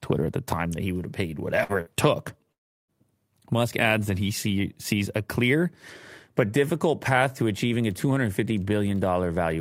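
Speech, with two bursts of packet loss just after "he would have paid", at 1.63 to 1.72 s and 1.81 to 1.89 s: each gap is bridged by a brief held continuation of the last sound, about 60 ms of audio is skipped, and speech resumes further on. Unlike those short patches, the 2.52 to 2.91 s gap runs 360 ms and is nearly all silence before the speech jumps ahead, which points to a likely long network dropout.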